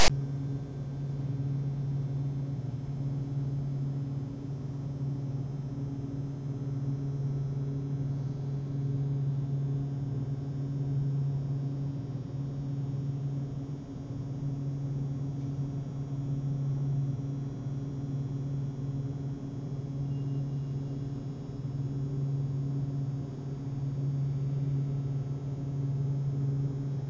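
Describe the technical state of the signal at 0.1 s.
A harsh, lopsided rasp with abrupt edges runs from 0.0 to 0.10 s, falling to dead silence just before 0.1 s. This is file tags played as audio: a block of text metadata and its zero padding decoded as though it were sample data.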